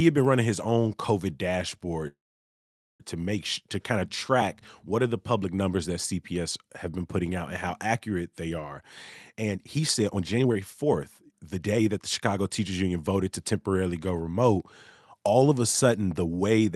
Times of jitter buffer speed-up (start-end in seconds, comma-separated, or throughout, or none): 9.33-10.86, 11.26-13.53